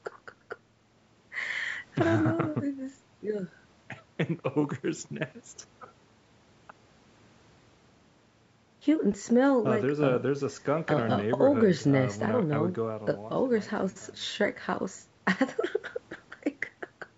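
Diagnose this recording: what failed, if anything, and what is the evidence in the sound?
Nothing failed in this recording, and the sound gives no evidence of any fault.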